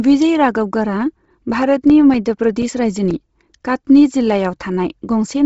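A low-bitrate transform codec, likely Bluetooth LC3 compression, runs throughout. It strips much of the upper spectrum and patches the gaps with noise, which fits about 24 kbps in 7.5 ms frames. The speech sounds heavily grainy and breathy, with nothing above 7.7 kHz.

From 1.90 to 3.59 s come CD scratch ticks. A blemish destroys more data on each disc revolution than error correction can rebuild, so the player interpolates or mutes those samples. Eight brief ticks cut into the speech, the longest only a few milliseconds.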